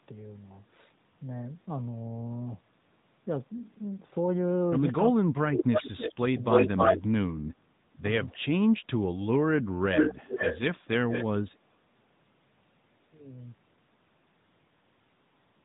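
The whole recording passes through the AMR narrowband mobile codec, AMR-NB at 10.2 kbps. The codec rebuilds the speech from a vocal-tract model and a few excitation pulses per subframe, and nothing above 3.8 kHz survives. The result is a muffled, telephone-band voice with a plainly audible buzzy, synthetic edge.

From 5.1 to 5.67 s, the echo canceller likely mistook simultaneous talk from both sides for loudspeaker echo and clamped down on the talker. This is speech suppressed in double talk. The voice sinks by about 40 dB over roughly 0.4 s of that span, sounding as if it drops away.

From 5.73 to 6.15 s comes an echo leak, likely from a speakerphone whose canceller let its microphone pickup through. A copy of the voice returns 306 ms late, about as loud as the speech itself.

Between 6.32 and 7.57 s, the double-talk suppression likely strikes again, cutting the voice by up to about 30 dB for roughly half a second in total. 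Inside that span, from 6.5 to 6.97 s, the 306 ms echo returns slightly louder than the speech, at about 5 dB above it.

From 9.5 to 10.57 s, suppression likely affects about 0.7 s of voice in dips reaching about 30 dB. Overlapping it, from 9.94 to 10.76 s, an echo leak now arrives 427 ms late at roughly speech level. A briefer, quieter 427 ms echo follows from 11.09 to 11.26 s, about 5 dB below the speech.

From 11.48 to 12.03 s, double-talk suppression likely dips the voice once more, by about 25 dB for roughly 0.3 s.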